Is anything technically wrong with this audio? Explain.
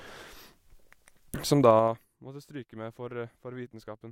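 Yes. From 1.37 to 2.13 s, just before "måtte stryke med", the speech is pulled down by roughly 25 dB in 3 dB jumps at about ten per second, with no smoothing between them. That is zipper noise: each abrupt gain jump puts a small click on the signal, heard as a ticking ride on the fading speech. A waveform shows a staircase envelope, and a spectrogram shows faint vertical broadband lines at each step.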